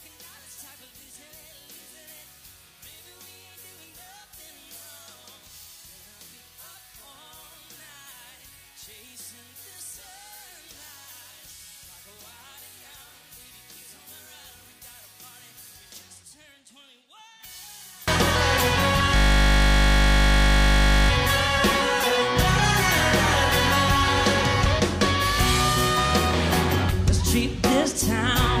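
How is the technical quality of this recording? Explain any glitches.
Two real problems here. From 0 to 18.08 s, summed to mono, the sound drops by about 26 dB to a faint trace, most likely one channel inverted, so the shared content cancels. From 19.16 to 21.1 s there's a system hang loop: one 20 ms slice repeats over and over, giving a steady 50 Hz buzz before playback carries on with essentially nothing lost.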